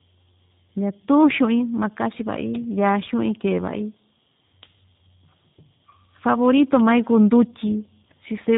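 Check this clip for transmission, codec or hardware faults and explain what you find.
Tandem speech coding runs through the whole clip. The speech passed through CVSD, then G.711 mu-law, then G.729A at 8 kbit/s, so two speech coders worked in a row, the second encoding the first's already damaged output. Nothing sounds above 3.8 kHz, and the result is rougher and more warbly than G.729A alone, which separates it from a single low-bitrate codec.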